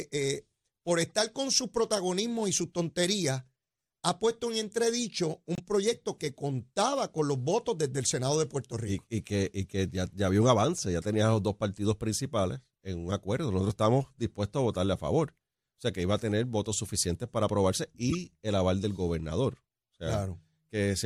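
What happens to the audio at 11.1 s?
Nothing goes wrong at 11.1 s; the speech carries on there without any audible fault.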